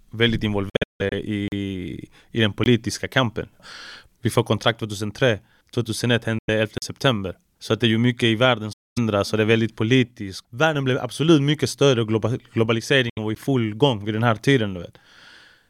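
Packets likely failed to reach the headphones in time, a Bluetooth dropout, so the speech falls silent in ragged holes from 0.69 to 1.13 s, losing about 279 ms with the longest gap near 160 ms. At 1.48–1.52 s a 40 ms block of digital silence cuts in and out, and a 20 ms one follows at 2.64–2.66 s after "i den". A shorter dropout follows at 6.38–6.49 s, then another zero block at 6.78–6.82 s, and a longer dropout at 8.73–8.98 s. Another dropout at 13.09–13.19 s precedes "var i full gång", and a 12 ms zero block at 13.35 s between "var i" and "full gång vid den" lands as a tick.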